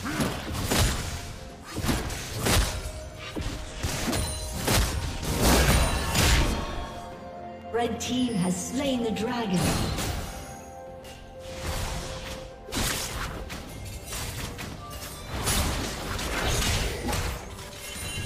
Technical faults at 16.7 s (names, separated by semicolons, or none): clock drift buffer slips